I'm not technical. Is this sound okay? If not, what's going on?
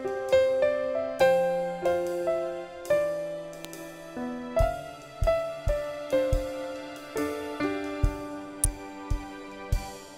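No. There is an electrical switching spike at 3.65 s and another at 8.64 s: each is a sudden snap sitting on top of the sound. It's likely a nearby switch, motor or static spark whose tiny arc leaked into the audio line.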